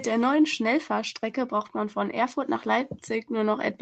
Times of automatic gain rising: 0.05-3.82

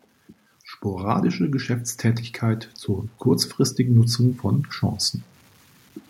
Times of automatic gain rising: 0.85-2.79, 3.76-4.48

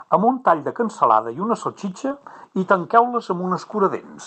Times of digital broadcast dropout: none

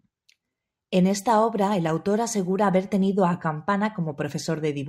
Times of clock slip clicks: 0.12-4.87

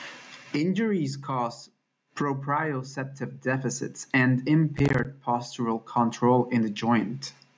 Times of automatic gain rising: 0.96-3.89

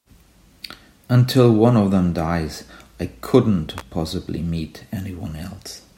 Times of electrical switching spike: 3.78-3.81

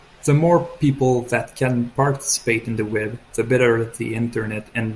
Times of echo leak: none

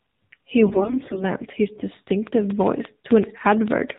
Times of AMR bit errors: 0.66-1.25

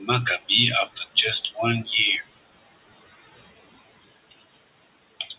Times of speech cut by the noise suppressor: 5.20-5.33

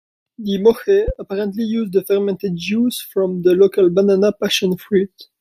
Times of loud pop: 1.08-1.12

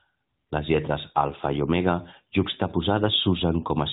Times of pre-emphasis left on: none

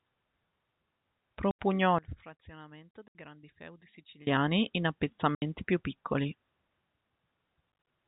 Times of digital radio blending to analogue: none

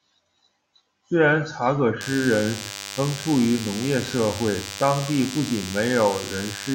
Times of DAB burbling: none

